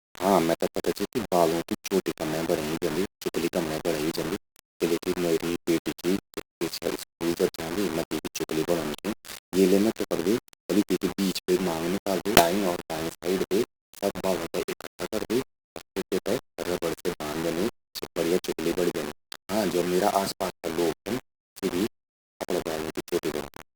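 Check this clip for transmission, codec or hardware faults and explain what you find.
Two faults are audible: a grainy distortion across the whole speech, and a jump in the audio just past the 12-second mark.

Throughout, the speech sounds harsh and gritty, with quiet passages breaking up and the grain rising and falling with the speech, sitting only about ten decibels below it. This is low bit depth without dither, likely rounding to about 4 bits, so the error tracks the signal.

From 12.35 to 12.41 s, right after "तींकि बीच बे मांग", the audio lurches forward with a brief blip, as if a piece is missing. The likely cause is a stream segment skipped: a segment failed to load and playback carried on from the next.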